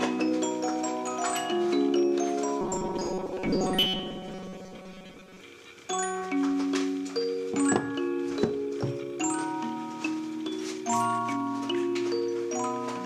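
From 2.61 to 5.41 s, robotic sound from repeated short buffers: a rigid 188 Hz buzz, unlike a steady underlying hum, likely from a 5.3 ms buffer being repeated.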